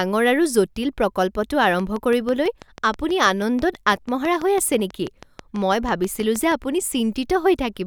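From 1.64 to 6.53 s, after "আৰু জটিল প্ৰকল্পটো", a train of clicks, likely interference, ticks regularly at 6.15 per second: evenly spaced waveform spikes and vertical spectrogram lines.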